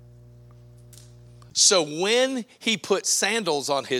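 From 0 to 1.5 s a steady low 60 Hz tone sits roughly 25 dB under the speech: mains hum, power-line energy leaking in through a ground loop or nearby transformer.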